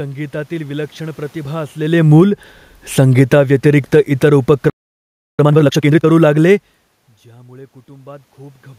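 A speech clip in which, just after "विलक्षण प्रतिभा", the level starts sinking at 1.77 s, voice and room background dropping together by about 13 dB until 6.54 s. This is automatic gain falling: the gain control judged the input too loud and kept turning its gain down. Inside that descent, from 2.25 to 2.63 s, the sound briefly swells again by about 4 dB, voice and background rising as one. That is automatic gain rising, the control nudging its gain back up after judging the input too quiet for a moment. At 4.70 s the speech cuts out mid-flow and the output stays silent for 0.69 s until 5.39 s. This is a playback stall, likely caused by the player running out of data or its thread being blocked. From 5.39 to 6.07 s the speech runs hurried at twice normal speed, yet at its usual pitch. This is time-compressed catch-up, the player cutting out and cross-fading small slices to clear its backlog after the stall. 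The level shifts from the talker moving near 1.5 s and 6.5 s belong to the recording itself.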